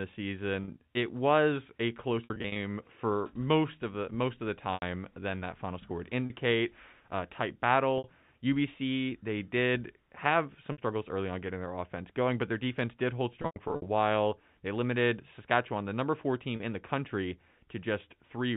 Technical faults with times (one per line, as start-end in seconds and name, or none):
0.64-0.68 packet loss with pitch repetition
2.24-2.56 packet loss with pitch repetition
4.74-4.82 packet loss with pitch repetition
6.26-6.30 packet loss with pitch repetition
7.98-8.04 packet loss with pitch repetition
10.72-10.78 packet loss with pitch repetition
13.42-13.86 packet loss with pitch repetition
16.56-16.60 packet loss with pitch repetition